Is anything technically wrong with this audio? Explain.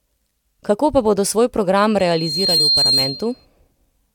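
Yes. From 1.99 to 3.46 s, loudspeaker feedback squeal: the microphone re-amplifies its own loudspeaker output, so a 4.2 kHz tone swells over about half a second to somewhat above the speech. Its build-up distinguishes it from a steady interference whistle.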